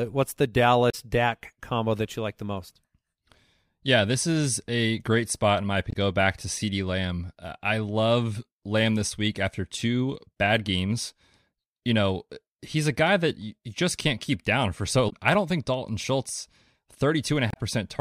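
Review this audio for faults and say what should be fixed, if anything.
Damaged data in a compressed stream produces four short bursts in the speech, at 0.88–0.95 s, 5.89–5.96 s, 15.06–15.13 s and 17.49–17.57 s, each about 70 ms long. At each point the decoder met corrupted frames, misread them, lost sync and had to find the next valid frame header, which is heard as a brief chirp or blip. Fix this by re-encoding from a clean source and verifying transfers with checksums before decoding.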